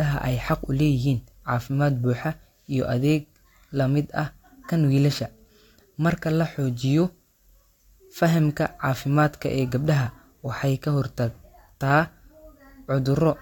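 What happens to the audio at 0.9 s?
Nothing goes wrong at 0.9 s: the speech carries on intact through that moment, with no dropout, click or distortion to be heard.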